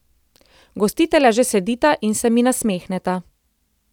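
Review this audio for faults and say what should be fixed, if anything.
Nothing stood out on listening to this speech recording, so there is nothing here that needs fixing.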